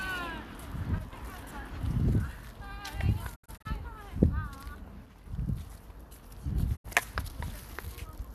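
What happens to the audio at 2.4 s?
Nothing goes wrong at 2.4 s; the audio there is intact, with no dropout, click or other fault to be heard.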